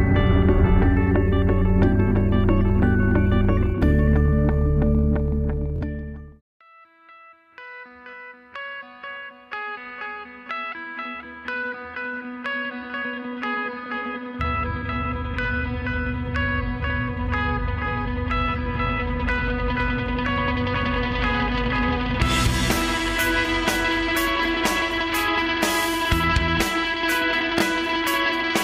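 At 5.76 s a brief buzzing stutter cuts in, with a tiny slice of sound repeated rapidly for about 56 ms before the audio jumps ahead. A shorter repeat follows at 27.59 s, lasting about 42 ms. This is Bluetooth stutter: packets arrived late or not at all, so the receiver kept replaying its last buffer. The gaps, about 46 ms and 23 ms, fit two lost frames and then one.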